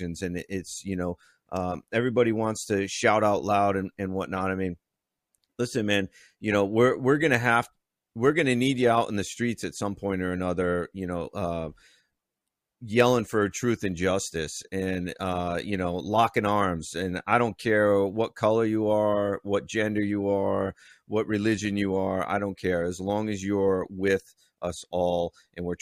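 No technical faults can be heard anywhere in this speech recording. Nothing in the signal breaks, drops out or changes character at any point.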